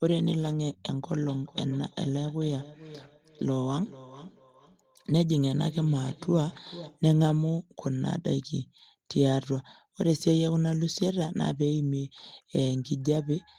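From 1.23 to 7.06 s, the speech carries a feedback echo between two devices. Each word returns roughly every 0.4 seconds, thinner and more ringing, peaking about 18 dB below the speech. A second device replays the signal, and this microphone picks it up again.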